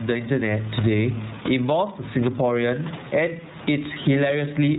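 Throughout the speech, gain pumping is present. The input gain is likely set far too high for the microphone, so a fast limiter or compressor clamps down on each loud syllable and releases in the pauses. The level swings by something like 15 dB. The room noise sits about 29 dB below the speech. Loud and quiet parts are pressed toward one level, and the speech sounds squashed and breathing.

Also throughout, the iLBC codec is audible. This narrowband VoIP codec rebuilds each frame's excitation independently, here in its 30 ms frame mode at around 13.33 kbps. Nothing above 4 kHz survives, so sibilants and consonant detail are dulled. The damage is plainly audible as a rough, slightly synthetic edge on the speech, and the background noise comes through poorly coded.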